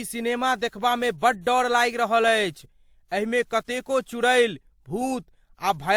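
Across the whole speech clip, two layers of coding artefacts sit on top of each other and are heard together, with nothing above about 20.2 kHz. The likely cause is transcoding between lossy codecs. The sound points to a WMA encode around 96 kbit/s followed by Opus around 48 kbit/s, with the second codec spending bits on the first one's artefacts while adding its own.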